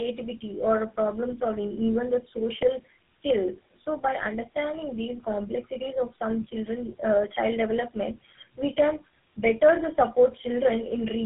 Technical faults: tandem speech coding

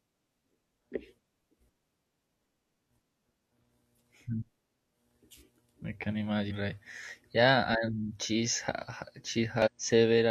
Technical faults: damaged data in a compressed stream

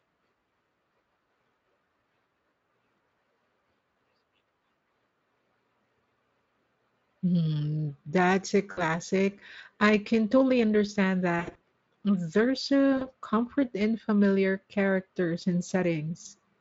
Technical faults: VoIP packet loss concealed by the speech codec

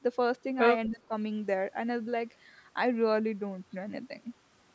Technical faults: speech suppressed in double talk

